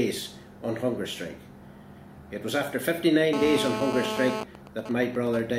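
From 3.33 to 4.43 s a GSM phone buzz appears: a nearby 2G handset in a call transmits bursts about 217 times a second, and the audio circuit rectifies them into a hard, raspy buzz at about 4 dB below the signal. Unlike mains hum, its rich harmonics sit on a 217 Hz base, not 50 or 60 Hz.

From 4.43 to 5.40 s the interference changes to GSM signalling bursts. The phone is still in the call but its user has gone silent, so it sends only short groups of bursts, roughly ten decibels below the signal. These become even ticks with a longer 217 Hz buzz twice a second rather than the continuous rasp before them.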